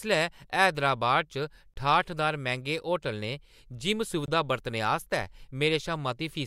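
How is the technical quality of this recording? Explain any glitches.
The speech has two brief dropouts. A gap between chunks appears at 1.74–1.76 s and 4.26–4.28 s, just before "बरतने आस्तै". The audio arrives in 2.5 s pieces, and about 21 ms of silence separates each piece, leaving short holes.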